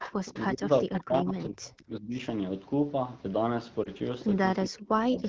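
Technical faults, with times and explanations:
0.00–0.42 s, 0.93–1.03 s, 5.19–5.29 s: echo leak. A faint, delayed copy of the voice trails the talker by 397 ms, about 10 dB down in the first two stretches and much quieter at the end. The likely cause is a far-end loudspeaker whose echo canceller let part of its microphone pickup return.
0.47–2.15 s, 4.64–5.23 s: speech suppressed in double talk. The voice drops out in pieces, losing up to roughly 35 dB and then 40 dB, for around a second and a half and then half a second. This is likely an echo canceller that mistook the talker for echo while both sides spoke and turned everything down.
3.83–3.89 s: lost AMR speech frames. A brief dip and slight warble interrupts the voice for an instant. One 20 ms frame was lost to radio errors, so the AMR-WB decoder filled the gap by repeating the previous frame's pitch and vocal tract settings at reduced gain.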